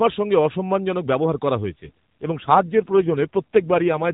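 Right after "সঙ্গে অসম্মানজনক ব্যবহার করা", at about 1.72 s, there's an AMR rate drop that lasts to the end of the clip. The speech keeps the same narrowband AMR-NB sound, nothing above 4 kHz and no gap, but it suddenly turns buzzier and more synthetic. That roughness fits the codec being pushed from its 12.2 kbps mode down to around 5.9 kbps, leaving fewer pulses per frame to model the voice, with the spare bits going to error protection.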